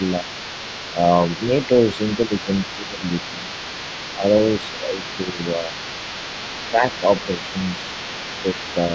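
A second voice runs under the speech from 0.0 s to the end, sitting roughly 15 dB below the talker. This is the other side's voice leaking through, likely residual loudspeaker echo that the echo canceller failed to remove from the microphone signal.

Speech suppressed in double talk appears at 0.2 s, 0.93 to 3.48 s, 4.19 to 5.73 s, 6.7 to 7.41 s and 8.39 to 8.55 s. The talker's level dips by a few dB in short patches, most deeply around 10 dB near 6.7 to 7.41 s, likely because the canceller attenuated everything while both sides overlapped.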